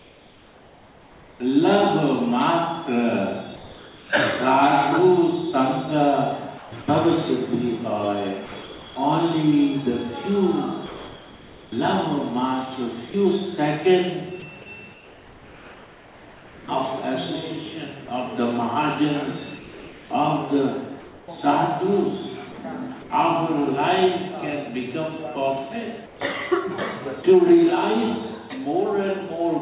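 From 0.0 to 1.4 s, the real background is replaced by comfort noise. The level drops by about 4 dB. The background sits about 28 dB below the loud parts. It is a smoother noise than the real background. The sender likely stopped transmitting during quiet passages, and the receiver filled the gap with synthetic noise. The same comfort noise in place of the background returns from 3.56 to 4.1 s, about 3 dB quieter.

From 6.58 to 16.68 s, the sound is chopped by the voice detector. Transmission switches on and off repeatedly. Quiet parts are cut out, and about 3.2 s in total is replaced by filler noise. Soft edges of the sound vanish. This likely comes from a detector set too close to the level of the quieter material.

From 19.58 to 20.1 s, comfort noise again replaces the background. The level is about 2 dB lower.

At 22.52 to 22.58 s, sound is dropped by the voice detector. About 30 ms of actual sound is lost, and steady noise takes its place. 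The detector likely judged a quiet tail to be background. Comfort noise continues in stretches up to 23.1 s. It appears again between 26.06 and 27.24 s. Within that span, at 27.22 to 27.24 s, another 20 ms of sound is dropped the same way.

At 27.70 s, there is a sudden gain jump. Everything falls by about 5 dB at once, sound and background together, with no fade. The lower level holds to the end. A gain step applied without a ramp is the likely cause.

Throughout, nothing is heard above 4 kHz. This fits the narrowband G.711 call path.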